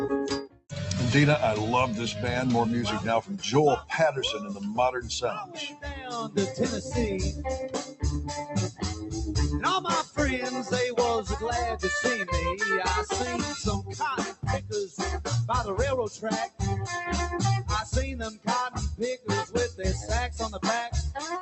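A noise suppressor made for speech runs across the whole clip, applied to sound it was never tuned for. It treats sustained tones and decaying tails as background noise and pulls them down. Onsets pass largely intact while what follows sinks, so the level swings by around 10 dB and the sound pumps and thins rather than holding steady.

Within that, six stretches show sound cut by the noise suppressor outright: 0.42 to 0.72 s, 3.22 to 6.9 s, 7.85 to 10.72 s, 13.83 to 14.98 s, 16.13 to 16.61 s and 18.3 to 20.62 s. The deepest drops run about 12 to 16 dB, the largest near 0.42 s. In each, held or fading material is pushed under, amounting to roughly a third of a second up to about a second per stretch, with sudden events still getting through.

The call path itself carries audio limited to about 8 kHz, consistent with Opus at roughly 64 kbps.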